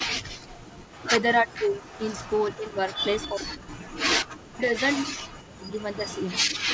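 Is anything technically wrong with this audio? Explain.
Yes, there are two problems, and they keep trading off across the whole clip.

First, speech suppressed in double talk. The voice dips hard from 0.0 to 0.59 s, 1.43 to 1.89 s, 2.57 to 5.78 s and 6.42 to 6.56 s. It goes thin or drops out in chunks, sometimes by around 40 dB, and more mildly at 1.43 s. The likely cause is the other side talking at the same time, so the echo canceller couldn't separate the near voice from loudspeaker echo and turned everything down.

Second, an echo leak. From 0.93 to 3.27 s, 4.29 to 5.03 s and 5.8 to 6.35 s, a faint copy of the voice trails behind it by about 0.35 s, sitting roughly 20 dB under the main speech. That's likely a loudspeaker on the far end whose echo canceller didn't fully scrub what its mic picked up, so some of it got sent back.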